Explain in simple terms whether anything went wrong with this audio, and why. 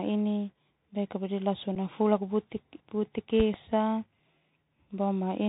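Several things went wrong. The whole recording passed through the Bluetooth CVSD headset codec, so it sounds thin and muffled, with scratchy s sounds and a gritty hiss underneath the speech. At 1.75 s there is unconcealed Bluetooth headset packet loss. One tiny chunk of audio, about 7.5 ms long, vanished on the wireless link, leaving a brief gap with a sharp edge. Between 3.40 and 3.57 s come two loud pops that jump well above the speech, which carries on underneath. They were likely caused by a sudden electrical jolt, such as a plug, a switch or static.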